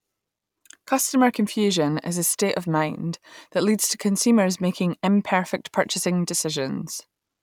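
No technical faults can be heard anywhere in this recording.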